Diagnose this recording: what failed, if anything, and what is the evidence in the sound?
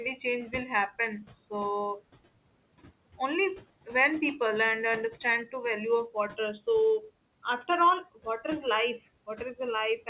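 Noise suppressor artifacts run through the whole clip, and they come from the call-processing stage. The steady room noise, which sits about 18 dB below the speech, is pulled down by about 21 dB in the pauses and then rises again under each phrase. The suppressor decides frame by frame which bands are noise and attenuates them. On a spectrogram the floor blinks between near-empty gaps and filled patches beneath speech, all capped at the 4 kHz call-codec edge.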